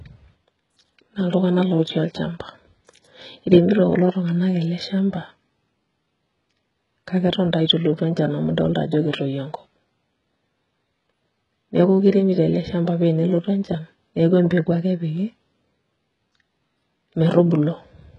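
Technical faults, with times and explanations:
Throughout, HE-AAC compression: the speech treble sounds synthetic and stops at 11 kHz, likely because only the lower band is coded and the top is rebuilt from copied lower bands. The s sounds turn gritty and lispy, heavy damage that fits about 12 kbps.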